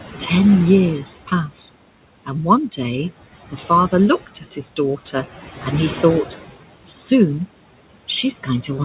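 Noise suppressor artifacts run through the whole of this speech recording. The suppressor estimates the steady room noise and pulls the bands it judges to be noise down by about 17 dB, frame by frame. The background therefore drops away in the pauses and swells back beneath each phrase. The room noise itself sits about 15 dB below the speech. Nothing is heard above 4 kHz, which fits the narrowband G.711 path the call went through.

Speech cut by the noise suppressor occurs twice. The first is from 3.52 to 3.70 s, just after "one day", where the level dips by up to about 7 dB over roughly a tenth of a second. The second is from 4.26 to 4.79 s, where it drops by up to about 13 dB across around a sixth of a second in total. In both places the suppressor mistook soft, low-energy parts of the speech for background noise and attenuated them with it, so those sounds come across faint or swallowed.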